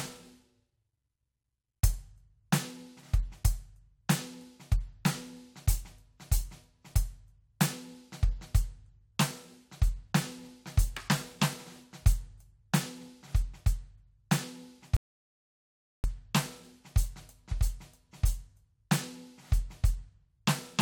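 At 14.97 s the music stops dead and stays silent until 16.04 s, a rebuffering stall that inserts about 1.07 s of extra time. The player drained its store of downloaded audio and had to wait for more data before continuing. What separates this from a dropout or packet loss is the resumption: the music picks up at the exact point it halted, with no passage skipped, so the gap adds time rather than removing any.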